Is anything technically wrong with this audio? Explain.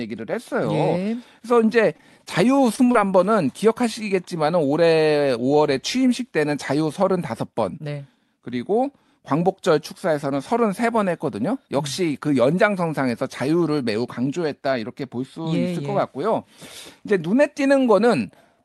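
Yes. From 1.97 to 2.96 s the speech turns choppy and robotic, with small pieces missing. This is repeated packet loss: eight gaps, the longest 23 ms, each patched by extending the preceding sound, so the concealment covers about 13% of that stretch of the call audio.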